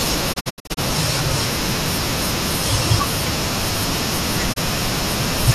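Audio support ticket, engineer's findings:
Receiver lost lock or rejected corrupt frames: digital broadcast dropout, 0.32 to 0.79 s. Speech muted in several short holes over about 430 ms, about 240 ms lost in total, longest gap 72 ms, each gap faded over 20 ms. Gap sizes fit roughly 24 ms frames.

Second digital broadcast dropout at 4.52 s. Single muted hole of about 24 ms, consistent with one failed frame, 20 ms fade. Programme resumes after it. Audio sent during both gaps is gone.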